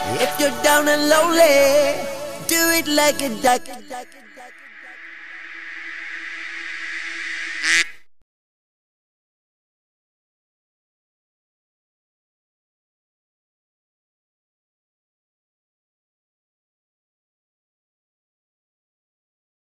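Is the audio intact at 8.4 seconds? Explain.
Yes, the audio at 8.4 seconds is intact, with no dropout, click, distortion or other fault to be heard there.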